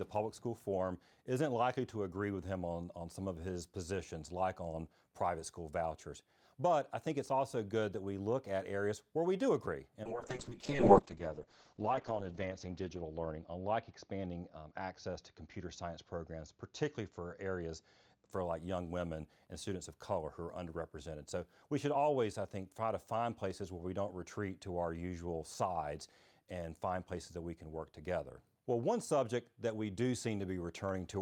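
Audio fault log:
10.06–18.37 s, call bitrate drop: the encoder's bitrate fell from 64 to 7 kbps, staying at its lowest for 2.25 s, and its bandwidth shrank from 20 kHz to 8 kHz, so speech after "where we do agree" turns coarse and muffled until "for like young women".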